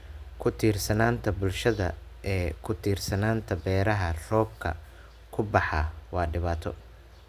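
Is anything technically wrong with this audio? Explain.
No, nothing in this speech recording points to a technical fault.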